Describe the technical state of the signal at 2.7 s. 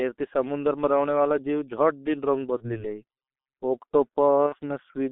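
VoIP packet loss concealed by the speech codec spans 2.57 to 2.85 s, just after "दिन रंग": one 30 ms frame vanished, the decoder extrapolated its last pitch and filter with falling gain, giving a fading smear that recovers slowly. Underneath, the G.723.1 codec at 6.3 kbit/s confines the sound to 250 Hz–3.5 kHz, leaving it heavily muffled and hoarse with blurred consonants.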